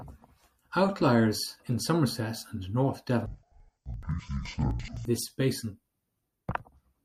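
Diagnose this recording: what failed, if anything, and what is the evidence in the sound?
From 3.26 to 5.06 s, between "and north" and "this basin", the speech drops an octave, sounds doubled and chops at 11.7 Hz. This is interleaved audio read as planar, a sample-format conversion fault. Each 85 ms block, which fits a 4096-sample block, plays as two half-speed halves.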